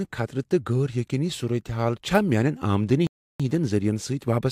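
At 3.07 s the player runs out of buffered audio and halts until more data arrives, a rebuffering stall. The speech drops to silence for about a third of a second, ending at 3.40 s, then picks up exactly where it stopped, with nothing missing but roughly 330 ms added.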